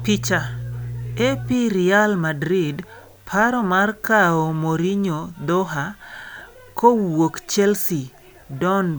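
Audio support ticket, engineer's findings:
Mains hum at 60 Hz, 0.0 to 1.53 s. Steady low tone under the speech, strong, around 10 dB below it. Probable ground loop or nearby transformer coupling the power line into the signal path. Check grounding and cable routing.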